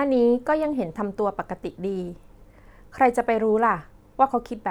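Nothing to flag: no audible technical faults anywhere in the speech recording.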